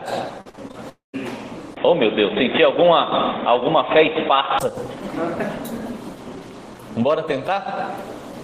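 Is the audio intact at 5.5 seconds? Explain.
Yes, the audio at 5.5 seconds is intact, with no dropout, click, distortion or other fault to be heard there.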